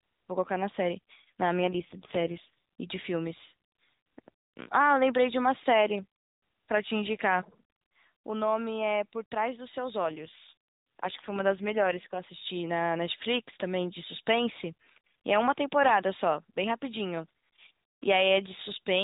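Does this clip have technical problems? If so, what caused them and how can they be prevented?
Yes. An AMR rate drop occurs at 1.58 to 2.54 s and again at 10.02 to 12.26 s. The speech, narrowband AMR mobile audio, turns buzzier and more synthetic, which fits the network cutting the codec from 12.2 to 4.75 kbps over a weak radio link, with no gap. A stronger, more stable radio connection prevents this.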